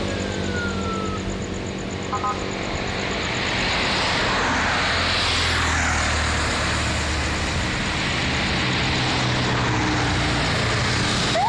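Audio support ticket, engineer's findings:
Nothing stood out on listening; no findings to log against this clip.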